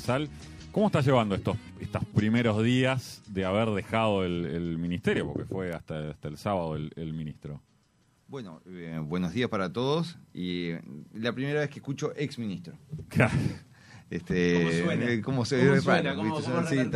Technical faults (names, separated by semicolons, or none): bit error spike